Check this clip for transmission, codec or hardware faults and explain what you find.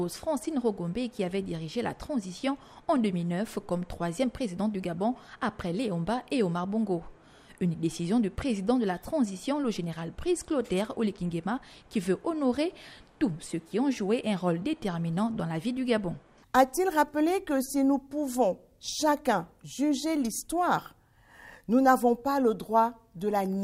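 Nothing stood out on listening that would point to a transmission, codec or hardware problem.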